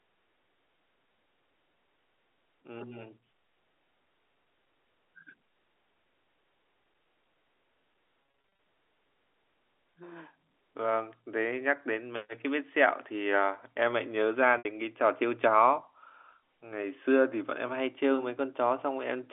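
Telephone-band speech, band-limited to roughly 300 Hz to 3.5 kHz as G.711 A-law coding would give, has packet loss with pitch repetition at 8.23–8.59 s, where 230 ms of short gaps scattered over 360 ms are bridged by repeated pitch periods that sound briefly held and buzzy, and again at 14.58–14.65 s, where a 70 ms loss is patched the same way.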